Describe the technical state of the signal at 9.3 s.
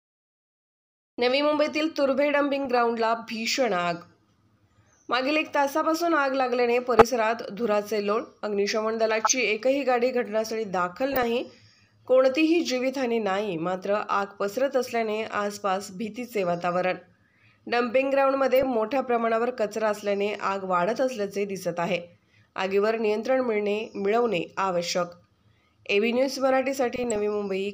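At 9.3 s the signal carries DAB burbling, running from 9.22 to 9.35 s, a span that fits about six MP2 frames. Bit errors on a weak multiplex, at a rate of roughly a third of a percent, slip past error correction and corrupt samples and scale factors, so individual sub-bands jump in level frame by frame. It sounds like brief blips of noise over the sound. A spectrogram shows blocky, frame-length patches lighting up in narrow bands, and the waveform shows short, irregular bursts.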